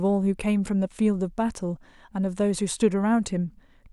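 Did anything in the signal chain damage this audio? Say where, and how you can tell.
No, nothing damaged this audio.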